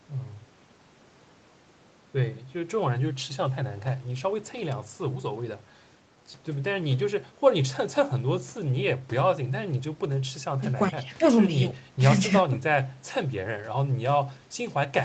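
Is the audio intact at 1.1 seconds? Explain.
Yes, the speech at 1.1 seconds is intact, with no dropout, click or distortion at that moment.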